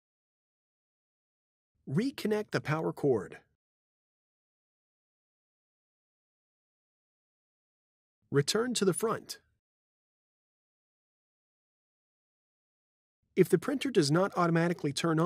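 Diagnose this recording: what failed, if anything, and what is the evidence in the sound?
Nothing failed in this recording, and the sound shows no evidence of a fault.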